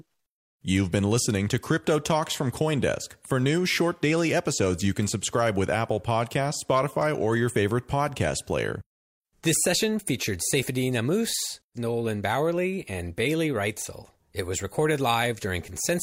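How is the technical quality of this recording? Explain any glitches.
Nothing in the recording stood out as a technical problem on listening, so there are no glitches to explain.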